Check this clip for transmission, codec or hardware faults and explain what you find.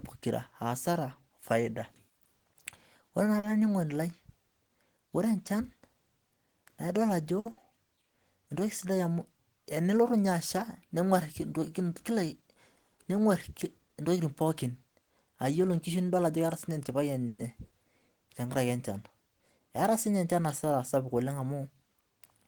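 Several packet-delivery faults affect the speech, all from how the receiver handled late or missing packets.

A short stall from a late packet occurs twice. At 3.39 to 3.45 s a sound is held about 40 ms too long, with a faint buzz or dip, and at 7.39 to 7.47 s the hold lasts about 60 ms. Each time a packet arrived late, the jitter buffer emptied, and the receiver stretched the last sound until it could continue with nothing lost.

A burst of packet loss follows immediately, from 7.51 to 7.59 s. The sound turns into a brief fading hold, then jumps ahead with about 60 ms of speech gone. Consecutive packets never arrived in time, so the receiver extended and faded the last sound before resuming further on.

A jitter buffer speed-up occurs twice. Between 12.11 and 12.57 s the speech runs about 6% fast at unchanged pitch, slightly hurried, with a few tens of milliseconds trimmed out. Between 16.17 and 17.03 s it runs about 7% fast, losing around 70 ms. 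Excess buffered audio was cut by removing tiny pitch-period slices.

A call audio freeze follows at 17.28 to 17.41 s. The last sound hangs as a fading buzz or hiss for about 110 ms, then the speech continues from where it stopped, with nothing missing. The likely cause is packets held up in transit, which drained the jitter buffer until they arrived.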